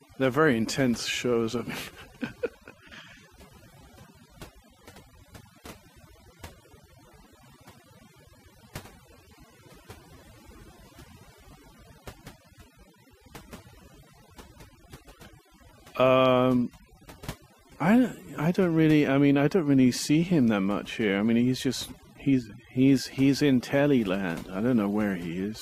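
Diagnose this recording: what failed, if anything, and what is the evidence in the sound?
Overdone noise removal in the processing stage, present throughout the speech. The background drops and breaks up into twinkling specks, and the voice has its quiet parts cut away along with bands near the noise estimate. Unlike codec warble, the gating tracks the noise floor rather than bitrate.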